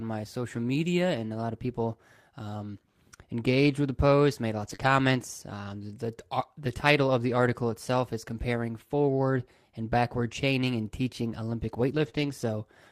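At 0.55 to 0.61 s, just before "media and a lot", a lost packet was rebuilt from error correction. About 40 ms of speech plays from the low-bitrate copy carried in the following packet, which fits two lost 20 ms frames. There is no gap, only a brief rougher, noisier patch. The same repair returns after "with the post made" at 4.59 to 4.73 s, about 80 ms.

Right after it, at 4.75 to 4.80 s, comes a short concealed packet loss. Roughly 20 ms never arrived, so the decoder extended the preceding sound and blended back into the real audio, which gives a smeared, wobbly moment instead of a grainy one. What sets it apart is that nothing real was recovered here. The sound is invented from what came before, while the rebuilt patches keep a degraded version of the actual speech.

Error-correction rebuilding resumes at 4.80 to 4.86 s, about 40 ms. Near the end, a longer rebuilt stretch runs from 11.90 to 12.08 s, about 100 ms. 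A second concealed gap follows at 12.10 to 12.13 s, again a brief smear. Another 100 ms rebuilt stretch runs from 12.13 to 12.31 s, so 11.90 to 12.31 s carries a coarse, noisy texture with a smear in the middle.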